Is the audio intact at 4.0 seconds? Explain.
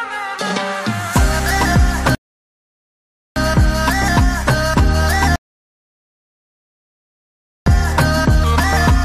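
Yes, at 4.0 seconds the audio is intact, with no dropout, click, distortion or other fault at that point.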